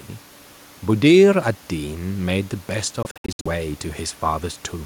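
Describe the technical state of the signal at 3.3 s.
At 3.3 s you're inside a likely Bluetooth dropout running 3.03 to 3.47 s: late packets get dropped, so the sound stutters through repeated silent gaps up to 64 ms, then carries on as if uninterrupted.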